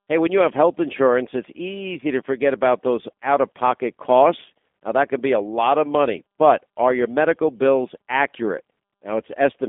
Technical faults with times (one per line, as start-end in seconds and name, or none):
0.00-9.69 G.729 codec